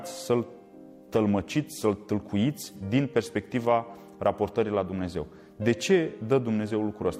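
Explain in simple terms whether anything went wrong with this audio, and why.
A short piece of the compressed audio, about 43 ms long, never reached the decoder, which fits a single lost frame. This is AAC frame loss with concealment. The decoder covered the gap by reusing the last good sound, leaving a brief smeared, noisy or phasey patch from 2.68 to 2.80 s.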